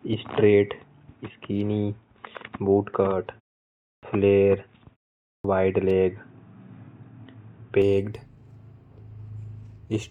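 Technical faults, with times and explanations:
0.00–7.82 s, input switched to a poorer device: the sound is dull and boxy, with nothing above 3.8 kHz, then brightens at 7.82 s with no gap and a level shift of about 5 dB. The cause is likely a change from a narrower-band microphone. On a spectrogram, energy stops at a flat ceiling near 3.8 kHz and then jumps upward, with a faint noise floor roughly 50 dB down.
3.97 s and 5.39 s, clipped start after a pause: after silences of 0.65 s and 0.51 s, the output device needs time to wake, so about 58 ms and 54 ms of sound are lost. Speech starts abruptly, without its first sounds. The waveform jumps from flat silence straight into speech, with no gradual rise.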